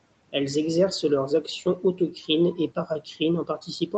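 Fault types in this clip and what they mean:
Speech cut by the noise suppressor: it treated bits of speech as noise, so brief moments after "exercent leurs actions" and later dip about 8 to 15 dB.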